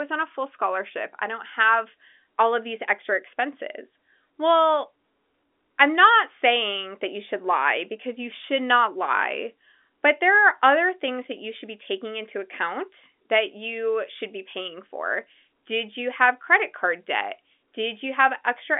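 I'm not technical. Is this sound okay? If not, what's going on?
Yes, it sounds like an ordinary phone call.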